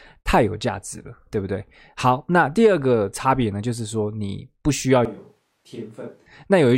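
A switch to a distant microphone runs from 5.05 to 6.26 s: the speech abruptly turns roomy and hollow, thinner in the bass and about 10 dB quieter, with more room noise. The likely cause is that the close microphone dropped out, leaving a farther one. The sound snaps back at 6.26 s.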